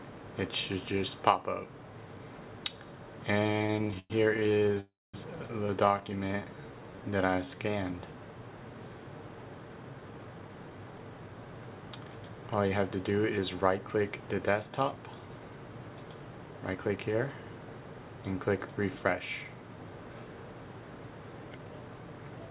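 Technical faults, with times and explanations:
3.44–4.78 s, repeated stalls (stutter): the audio catches and drags in a rapid chain of tiny hitches, 31 of them. The longest is about 107 ms. Packets kept reaching the receiver late or too slowly, so its jitter buffer repeatedly ran dry. Each time, it stretched out the last sound to fill the hole. About 421 ms was filled in, roughly a third of this stretch, yet nothing was lost, so the sound simply limps forward.
4.80–5.16 s, call audio freeze: the sound hangs on a fading continuation of itself and then drops to silence for about 230 ms before resuming exactly where it stopped. This is likely a burst of packets held up in transit that emptied the jitter buffer. The receiver bridged about 334 ms. Because nothing was skipped, that pause is inserted into the audio and pushes everything after it about 334 ms later.
5.86–6.00 s, repeated stalls (stutter): a brief second flutter of four very short hitches, each no longer than 10 ms. 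Together they fill about 40 ms. The cause is the same late packet delivery, so the buffer briefly ran short again and the receiver extended the last sound across each small gap.
6.28–7.70 s, jitter buffer slow-down: the audio turns noticeably sluggish and drawn out while keeping its pitch, running at about 84% speed. The receiver was rebuilding its reserve after the stalls. It repeated individual pitch periods and slivers of pauses over and over, adding about 239 ms. Those repeats lengthen the sounds without lowering them.
16.31–17.04 s and 21.51–21.89 s, jitter buffer speed-up: in both spots the audio briefly rushes forward at an unchanged pitch, at about 113% and 114% speed. The jitter buffer was holding more audio than its target. To trim the excess delay, the receiver cut out short pitch-period-sized pieces in quick succession, roughly a tenth of a second in the first span and a little less in the second.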